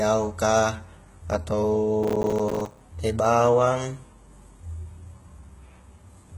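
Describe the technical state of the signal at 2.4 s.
Processor overload crackle runs from 2.03 to 2.81 s. Audio buffers of roughly 5 ms are repeatedly missing their deadlines, and about 40 of them drop out over that stretch, each leaving a short hard-edged gap of silence. Together the gaps form a gritty tearing crackle over the sound.

Throughout the clip, the treble has a gritty, metallic quality, with nothing above 11.8 kHz. This is likely HE-AAC compression at a very low bitrate, around 16 kbps, rebuilding the upper band from copied lower bands whose harmonics no longer line up.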